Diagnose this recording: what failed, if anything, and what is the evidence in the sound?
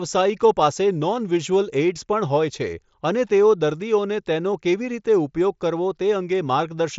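Nothing in the recording points to a failure at any stage. The speech has passed through a Bluetooth headset link using the mSBC wideband codec, which keeps the band up to about 8 kHz and leaves only a light graininess on the louder sounds.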